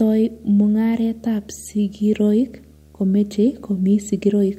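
From start to finish the speech carries video or display buzz, a screen or video cable coupling its picture refresh into the audio path. It sits at a 75 Hz field rate, well below the speech, as a rasping buzz with a fizz of hash riding above it. That 75 Hz repetition and the edgy, pulse-like texture set it apart from mains hum, which would settle on 50 or 60 Hz and sound smoother and more tonal.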